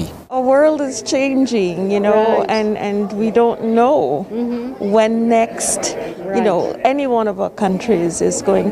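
No technical faults are audible anywhere in the clip.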